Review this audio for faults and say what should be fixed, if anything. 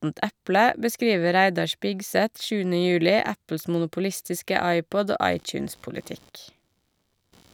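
Computer activity noise enters at 5.31 s and runs to the end of the speech clip at 7.53 s: a buzzing, chirping layer pulsing at around 70 times per second, roughly 35 dB below the speech. Changing load in the host computer is shifting the audio circuit's shared ground, so the interference follows machine activity, not the talker, and persists through pauses. A spectrogram would show fine vertical striations about 14 ms apart, forming a dense harmonic comb on a 70 Hz spacing that starts abruptly at 5.31 s. The waveform would show a low, regular pulse train riding through the gaps between speech. To prevent it, use a USB isolator or an external, separately powered interface, and route audio away from the computer's ground path.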